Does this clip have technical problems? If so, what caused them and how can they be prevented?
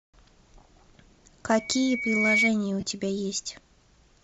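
Yes. Throughout the speech there is a breathy, grainy edge with thinned-out upper frequencies, likely caused by Bluetooth LC3 compression running at a modest bitrate: the encoder discards much of the upper spectrum and replaces it with noise fill. Streaming at a higher LC3 bitrate, or recording locally instead of over the Bluetooth link, would prevent it.

From 1.51 to 2.50 s a loudspeaker feedback squeal appears as a 2.2 kHz tone that swells over roughly 0.7 s to about 5 dB above the speech. A loudspeaker is being picked up by the microphone feeding it, and loop gain exceeds unity at that frequency. Lowering monitor gain, moving the microphone off the speaker's axis, or notching 2.2 kHz would prevent it.

From 2.80 to 2.83 s there is a brief noisy smear where lost LE Audio frames were concealed. The decoder repeated the previous spectrum with randomised phase for roughly 22 ms, which fits three 7.5 ms frames. 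Keeping the devices closer together, with less radio interference, would prevent these dropouts.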